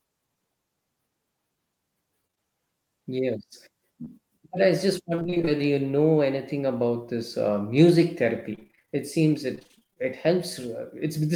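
At 2.27 to 2.39 s, three back-to-back short concealed packet losses each drop about 20 ms of the speech. The receiver bridges each hole by extending the preceding sound, giving a quick smear or wobble. A fourth loss sits between 4.05 and 4.22 s, where the patch also stretches the timing by roughly 20 ms. On a spectrogram these show as brief blurred patches where harmonics run on unchanged, then blend back into real detail.

Repeated packet loss with a robotic sound follows at 5.16 to 5.63 s (nine gaps), 8.55 to 8.97 s (nine gaps), and 9.55 to 9.98 s (eleven gaps, the longest 27 ms). In each stretch close to half the time is synthesized filler, so the audio turns choppy, with fragments missing. In the waveform the envelope becomes jagged and repetitive. The spectrogram shows smeared, frozen-looking harmonic stripes interrupted at short intervals.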